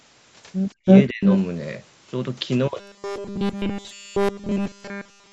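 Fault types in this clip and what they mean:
Speech suppressed in double talk: The echo canceller likely mistook overlapping talk for echo and turned it down, so the speech drops by around 40 dB at 0.80 and 1.09 to 1.23 s.
Echo leak: The far side's canceller likely let microphone pickup through, returning a delayed copy of the speech 324 ms late in scraps around 0.86 to 1.03 and 1.26 to 1.37 s.
Robotic sound from repeated short buffers: Audio likely arrived too seldom and was filled by looping short buffers. From 2.8 s to the end the sound becomes a rigid 200 Hz buzz, which fits 5 ms repeats.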